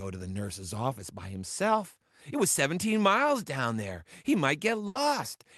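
At 4.87 s, a burst of packet loss: about 80 ms of lost speech is concealed by a fading repeat. The spectrogram shows smeared, decaying bands, then an abrupt waveform restart.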